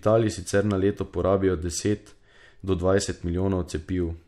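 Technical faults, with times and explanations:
Nothing wrong turns up anywhere in this bit of speech, so there's nothing to list.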